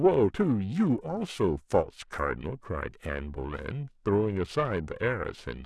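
From start to finish, the speech carries periodic clock jitter: interference is wobbling the converter's sampling clock at a steady rate of around 500 Hz, so every frequency present picks up sidebands at roughly that spacing, more pronounced on the higher components. It comes across as a rough, metallic edge that disappears in pauses. A spectrogram shows ghost lines flanking each harmonic, while the waveform itself looks nearly normal.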